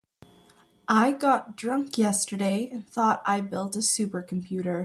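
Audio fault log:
No faults detected in the speech recording; nothing to log.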